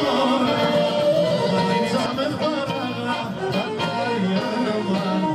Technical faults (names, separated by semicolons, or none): doubled audio track